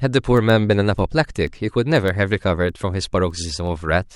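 From 0.13 s to 4.04 s there are word clock ticks: sharp, uneven clicks about every tenth of a second. The receiver isn't locked to the sender's clock and drifts by roughly 200 ppm, so one sample slips each time they cross.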